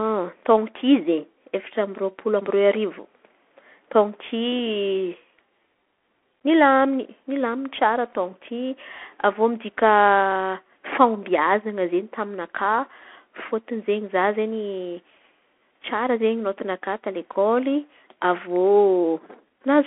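Throughout, the speech sounds thin and boxed in, with nothing above 3.8 kHz, scratchy s sounds and a grainy hiss underneath. This is the Bluetooth CVSD headset codec: its one-bit, adaptive-step coding can't track sharp high-frequency detail, so it smears and crackles.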